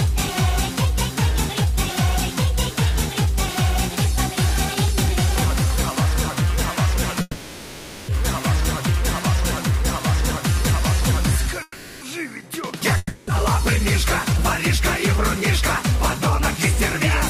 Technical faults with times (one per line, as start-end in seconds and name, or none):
7.21-8.11 call audio freeze
11.62-12.04 call audio freeze
12.97-13.30 long network dropout